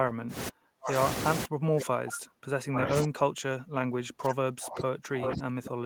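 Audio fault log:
0.49–1.0 s and 1.46 s to the end, speech suppressed in double talk: the speech ducks sharply, falling by as much as about 40 dB, and breaks up while another talker overlaps. This is likely an echo canceller mistaking the overlap for loudspeaker echo and attenuating everything.
0.86–0.91 s and 5.25–5.3 s, echo leak: brief scraps of the speech return about 0.82 s late, roughly 10 dB below the live speech at first and about 5 dB below later. This is likely a loudspeaker-side echo canceller letting residual echo slip through.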